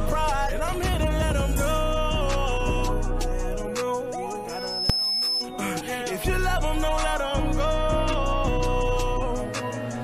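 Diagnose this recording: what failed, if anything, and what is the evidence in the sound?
Loudspeaker feedback squeal from 4.48 to 5.49 s. A 5.2 kHz tone builds over roughly 0.4 s to about signal level. Loop gain exceeded one.

Invalid numbers at full scale in a processing stage. One bang at 4.90 s. A 2.9 ms block jumped to full scale, which fits a 128-sample block.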